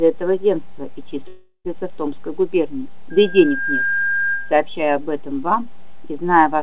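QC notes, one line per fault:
1.28 to 1.67 s, call audio freeze. The sound stalls here for about 0.39 s. The last fragment is stretched into a fading buzz or hiss, with about 30 ms of near-silence at the bottom. Then the audio picks up exactly where it stopped. Nothing is lost, but everything after is pushed later by the same 0.37 s or so. The likely cause is delayed packets draining the jitter buffer, with the receiver filling the wait.
3.1 to 4.62 s, loudspeaker feedback squeal. A single tone at 1.6 kHz rises out of the sound. It swells over roughly 0.7 s until it is about as loud as everything else. A microphone is picking up its own loudspeaker, and at this one frequency the loop gain goes above one. The tone sits well inside the narrow call band, which stops at 4 kHz.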